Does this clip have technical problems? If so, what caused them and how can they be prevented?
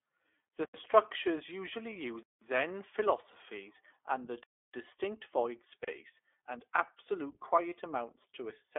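Yes. The whole clip carries iLBC codec damage. Speech is confined to roughly 300 Hz to 3.5 kHz, with a rough, synthetic texture from frame-by-frame excitation coding on 20 ms frames, which fits the 15.2 kbps mode. Carrying the call on a wideband codec such as Opus or G.722 would prevent this.

Lost iLBC frames occur from 1.90 to 1.93 s, just after "structures usually", and from 7.70 to 7.73 s, just after "and absolute". Each gap sounds like a briefly held, slightly buzzy vowel where the decoder repeated the last pitch cycle with added noise, which fits a single 20 ms frame lost each time. The voice recovers immediately because iLBC frames decode independently. A more reliable network path, or forward error correction or redundant packets, would prevent these losses.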